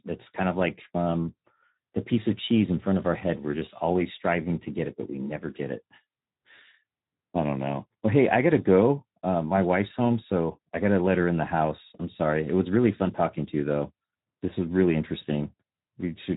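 From start to finish the speech carries the sound of the Speex codec, and it's plainly audible. There's nothing above about 3.8 kHz, so it's narrowband and boxed in, and the voice has that grainy, hoarse edge you get when a CELP coder is short of bits for the excitation signal. The damage level points to a low setting, something around 11 kbps.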